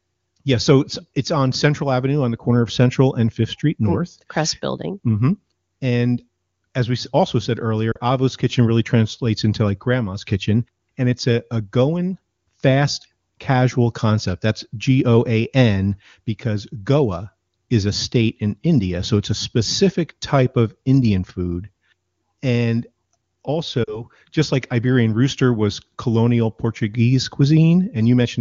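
Lost AMR speech frames at 7.92–7.99 s and 23.84–24.03 s: corrupted radio data forced the decoder to conceal about 40 ms each time, causing the speech to drop briefly to near silence.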